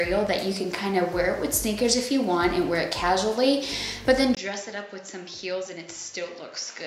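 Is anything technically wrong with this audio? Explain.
Yes. From 4.35 s to the end, the sound turns duller and quieter. After a 20 ms gap, nothing remains above 7.6 kHz, the level drops by roughly 10 dB, and a faint new noise floor appears. This likely reflects an input switched to a poorer device.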